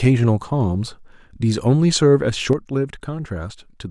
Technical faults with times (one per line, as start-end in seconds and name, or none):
2.53-3.90 one channel drops out